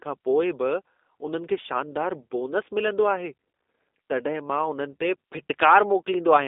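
G.729 codec damage runs through the whole clip. The speech is rebuilt from a vocal-tract filter, a pitch predictor and a few pulses per frame, so it sounds rough and slightly synthetic, which fits an 8 kbit/s coder. The band is confined to 250 Hz to 3.7 kHz, with nothing above 3.8 kHz.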